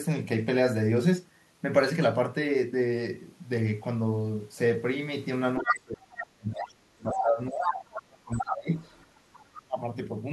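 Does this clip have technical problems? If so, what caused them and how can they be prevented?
Yes. The echo canceller on the talker's end likely failed to subtract all of the loudspeaker signal picked up by its microphone, so other side's voice leaking through is heard at 5.58–5.75 s, 6.21–6.25 s, 6.57–6.65 s, 7.11–7.2 s, 7.52–7.84 s and 8.38–9.06 s. These fragments range from about as loud as the speech to roughly 15 dB below it. Better echo-path modelling, a quieter loudspeaker or a headset would prevent this.

When both sides talked at once, the same canceller likely could not tell near speech from echo and attenuated everything, so speech suppressed in double talk appears from 5.61 to 8.7 s and again from 9.16 to 9.78 s. The voice sinks by as much as about 35 dB in the first stretch and about 30 dB in the second, dipping for roughly three and a half seconds in total. A double-talk detector that keeps near-end speech open, or a headset, would prevent it.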